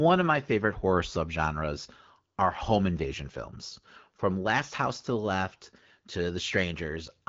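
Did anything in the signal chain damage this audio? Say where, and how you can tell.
No, nothing in the chain damaged this speech: it arrives through an AMR wideband (HD Voice) path at 12.65 kbit/s, a rate at which that codec keeps speech clear, so all that can be heard of it is the light, expected coding character.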